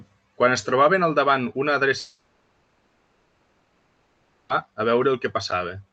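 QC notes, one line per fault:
1.99–4.51 s, long network dropout: packets likely stopped arriving for about 2.5 s right after "trobaven al davant una", so the receiver stretched the last sound into a fading buzz or hiss. Speech resumes through the Opus path, with the lost 2.5 s never played.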